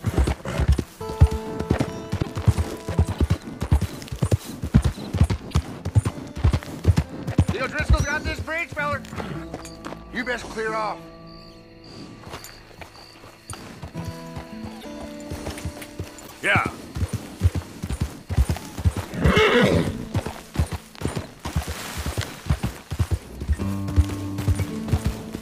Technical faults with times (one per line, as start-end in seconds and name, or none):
2.21-2.26 broken MP3 bit reservoir
3.18-3.20 broken MP3 bit reservoir
5.50-5.53 broken MP3 bit reservoir
14.80-14.86 broken MP3 bit reservoir
16.26-16.32 broken MP3 bit reservoir